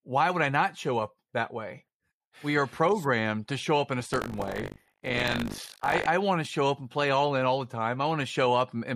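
From 4.1 to 6.07 s, between "show up in a" and "I want to show", buffer tearing adds a robotic 50 Hz rattle. Writer and reader have slipped, so each 20 ms period splices in audio roughly 70 ms stale. Waveform and spectrogram show hard joins every 20 ms.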